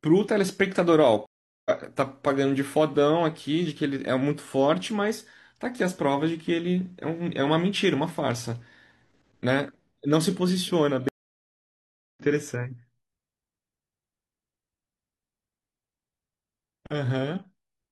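Stream reconnects break the speech at 1.26 s and again at 11.09 s. Each time the connection dropped, the player went silent, then reconnected and started a new decoder partway through the stream. The first gap lasts 0.4 s, and the speech picks up roughly 0.3 s further on than where it stopped. The second gap is longer at 1.1 s and skips ahead roughly 1.5 s, so a chunk of speech is simply missing.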